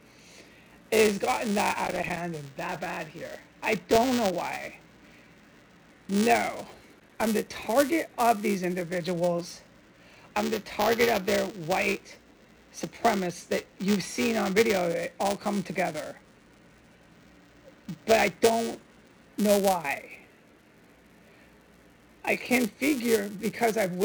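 A steady robotic buzz near 345 Hz rides on the sound throughout. That is buffer tearing: writer and reader cross each period, splicing in a sliver of audio about 5 ms old, which fits a 128-sample buffer. From 1.84 to 2.19 s, and again from 6.99 to 7.27 s, an irregular burst of scratchy crackle breaks in. That is loose connector crackle, a worn contact rapidly making and breaking and chopping the signal. Between 3.63 and 4.12 s come four small ticks, the longest about 1.5 ms. These are CD scratch ticks, where a blemish defeats the error correction once per disc revolution and the player patches or mutes the damaged samples.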